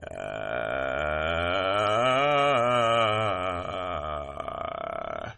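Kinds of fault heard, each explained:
MP3 compression: The music has nothing above 11.7 kHz and plainly audible coding damage throughout, likely from MP3 encoding at a low bitrate around 32 kbps.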